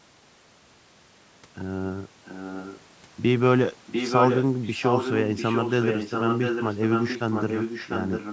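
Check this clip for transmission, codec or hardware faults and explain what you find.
An echo leak runs through this speech clip: most likely, the far end plays the call on a loudspeaker and its echo canceller failed to suppress what its microphone picked back up, returning the voice about 0.7 s late. The delayed copy appears from 2.25 to 2.8 s, well below the speech; from 3.86 to 4.43 s at roughly equal loudness; and from 4.63 s to the end only slightly quieter, smearing the speech with a trailing double.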